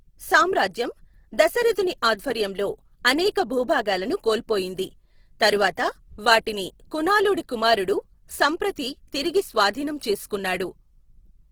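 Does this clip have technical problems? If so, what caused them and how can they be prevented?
Yes: throughout the speech there's grainy, rough, noisy texture, likely Opus compression in CELT mode, filling starved bands with noise, which fits roughly 16 kbps. Encode at a higher bitrate next time.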